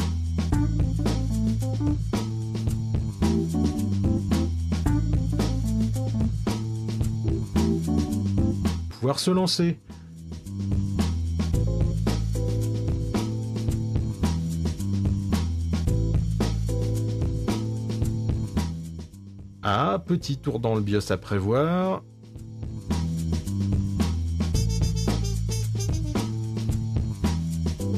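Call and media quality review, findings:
Stream segment skipped at 8.90 s: abrupt jump ahead with brief blip; waveform shows hard discontinuity, spectrogram a thin vertical broadband line. Likely a failed segment fetch, player continuing with the next.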